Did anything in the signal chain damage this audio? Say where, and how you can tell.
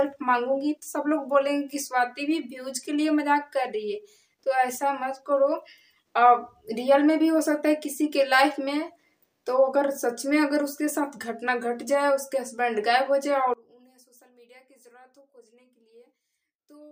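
Yes. From 13.54 s to the end, the sound collapses by about 26 dB, leaving a faint residue where the centred content disappears. This is likely one channel inverted in the analogue wiring, so identical left and right content cancels when summed to mono.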